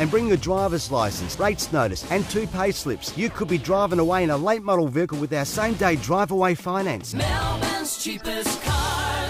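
No technical faults can be heard in this audio, so there is nothing to describe in time order.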